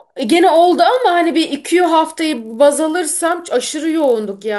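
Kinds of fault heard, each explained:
Resampler restarted on every block: Each 20 ms block was rate-converted in isolation, leaving a small error at every block edge. This produces a 50 Hz buzz across the speech that stops in the pauses, unlike mains hum, which would continue through the silence.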